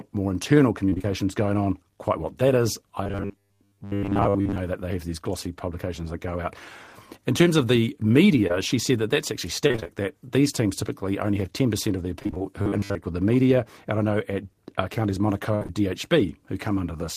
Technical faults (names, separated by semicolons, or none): repeated packet loss (robotic sound); robotic sound from repeated short buffers; short concealed packet loss; burst of packet loss